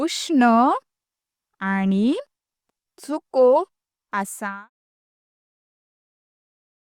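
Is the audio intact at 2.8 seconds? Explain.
Yes, the speech at 2.8 seconds is intact, with no fault at that point.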